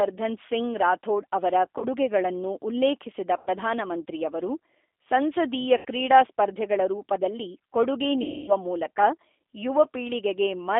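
From the first second to the last, this speech is running through the G.729 codec at 8 kbit/s. It rebuilds the voice from a vocal tract filter, a pitch predictor and a handful of pulses per frame, so you get that plainly audible rough, slightly synthetic texture. On top of that, the line band here runs only from 300 Hz to 3.6 kHz, so the voice sounds thin at the bottom and dull at the top.

Then there are four dropouts from VoIP packet loss concealed by the speech codec. The first runs from 1.78 to 1.85 s, where a 40 ms gap fits two lost packets. The next three are 100 ms at 3.37 to 3.51 s, 80 ms at 5.77 to 5.85 s, and a long 260 ms stretch at 8.22 to 8.52 s. In each, the decoder keeps extrapolating from its last pitch and filter while turning the gain down, so the voice smears into a buzzy tone or coloured noise that fades. Because each frame leans on the previous one, the voice stays a bit weak or off for a moment after the packets return.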